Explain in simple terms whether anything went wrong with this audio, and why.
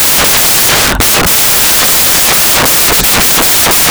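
Yes, something went wrong. From start to finish this speech carries loud, harsh noise, because the samples were built from the wrong bytes: the player stitched each number together wrongly.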